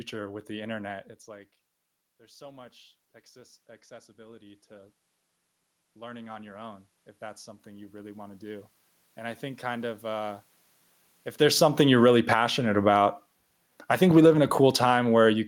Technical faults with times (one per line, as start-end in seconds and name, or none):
2.07-5.01 automatic gain rising
5.96-10.09 automatic gain rising
11.38-13.04 automatic gain falling
12.39-13.30 automatic gain rising
13.76-15.48 automatic gain falling